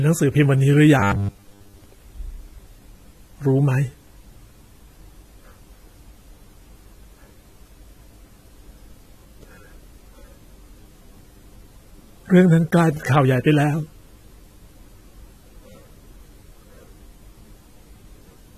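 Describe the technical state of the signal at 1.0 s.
Robotic sound from repeated short buffers runs from 1.00 to 1.84 s. New audio likely arrived too seldom, so a short slice was looped in place of most of the real signal, forcing a rigid, metallic 100 Hz buzz onto the speech, which fits a 10 ms buffer. AAC compression is plainly audible underneath throughout, with nothing above 14 kHz. A low bitrate, likely around 32 kbps AAC-LC, would account for the coarsely quantised spectrum, which leaves the sound dull and smeared with a fizzy edge.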